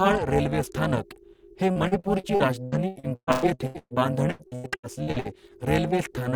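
Throughout the speech, overlap-add ripple is present. Frames rejoin with uneven gain, so the level swings by about 60 dB around 400 Hz, giving a metallic buzz. After "रेल्वे स्थानक हे", from 1.71 to 3.94 s, repeated packet loss chops the sound, with patched gaps up to 123 ms. From 4.31 to 5.34 s it returns, with gaps up to 88 ms.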